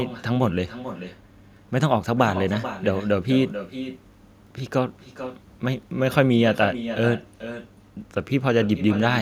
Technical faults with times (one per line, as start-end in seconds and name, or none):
0.00-9.21 echo with no canceller